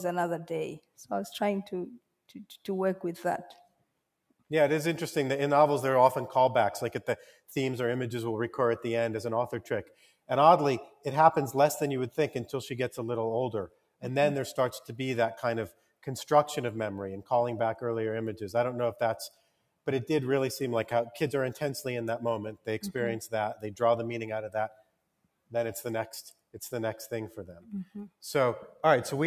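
Throughout, a noise suppressor applied to music or sounds treats steady tones and decays as noise. Level swings by around 5 dB, the waveform envelope pumps, and spectrogram tails fade early.

Sound cut by the noise suppressor occurs at 0.79–4.42, 7.19–7.52, 9.84–16.07, 19.29–19.87 and 22.55–28.83 s. Held sound sinks by up to about 18 dB while attacks pass, showing as waveform dips and darkened spectrogram patches.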